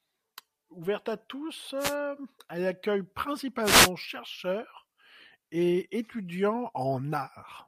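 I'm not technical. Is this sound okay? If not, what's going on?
No. At 1.78–1.95 s and 3.62–3.90 s there are wireless microphone noise hits: brief swishes of static as the radio signal fades, unlike a digital dropout's sudden silence.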